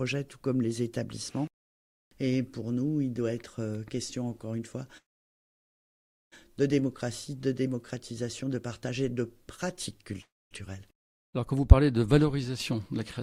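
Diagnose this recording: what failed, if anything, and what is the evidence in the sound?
Network stage: the audio stalls twice in a call audio freeze, at 4.97 to 6.34 s and at 10.22 to 10.53 s. The last sound runs on briefly as a fading buzz or hiss, then goes quiet for about 1.31 s and 0.25 s, and resumes exactly where it stopped, with nothing lost but later timing. A waveform shows a flat stretch; a spectrogram shows a short smeared tail and then an empty band. The likely cause is delayed packets draining the jitter buffer.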